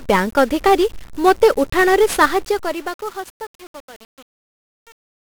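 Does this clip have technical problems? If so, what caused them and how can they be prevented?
Yes. The whole speech clip carries 1-bit DFPWM compression, and it's heavy. Each sample is squeezed into a single bit that nudges a tracking level up or down. That leaves a thick layer of broadband quantisation noise, so everything sounds fuzzy and crackly and the treble sinks into hiss. The damage points to a DFPWM stream at around 48 kbps. To prevent it, store or send the speech with a proper multi-bit codec, or at least raise the rate.

There's also truncation distortion on a fade. The fade-out starts at about 2 s and runs down to 5.33 s. From 2.13 s, though, the fade is being computed with too few bits and no dither, which fits roughly 9-bit resolution. As the level drops, the waveform collapses into coarse steps. From 2.74 s to the end, the quiet tail turns gritty. To prevent it, run fades at high bit depth and dither whenever you reduce word length.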